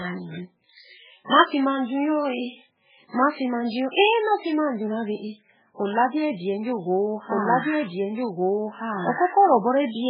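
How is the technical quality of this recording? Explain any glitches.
The technical quality is poor. Two faults are audible in this speech recording.

Throughout, the sound is watery and swirly, with heavy codec damage. Nothing is heard above 5 kHz. The likely cause is MP3 compression at a very low bitrate, around 8 kbps. With so few bits, the encoder drops weak frequency lines. These lines flicker on and off between frames. The treble is also cut off sharply. So s sounds lose their edge and attacks smear.

From 6.84 s to the end, a doubled audio track is heard. A second full-band copy of the audio runs about a second and a half behind. It is about as loud as the original. This is likely from the audio being captured twice through a slower path, or from an edit holding two copies out of step. The copy starts abruptly. It adds no echo decay or room colour. It sounds like two overlapping streams.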